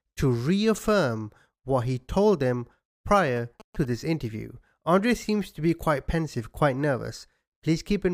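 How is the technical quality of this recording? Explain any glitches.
One glitch mars the speech: GSM signalling bursts from 3.13 to 3.85 s, between "what he told them" and "this interview". A nearby 2G phone's radio bursts get rectified by the audio circuitry, producing galloping ticks and short 217 Hz buzzes, roughly 20 dB below the speech.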